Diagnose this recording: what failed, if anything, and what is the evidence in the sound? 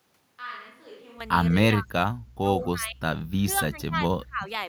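Call processing: speech suppressed in double talk, with level dipping roughly 20 to 25 dB at 1.51–1.93 s, 2.63–3.02 s and 3.40–4.48 s, likely the echo canceller ducking both talkers.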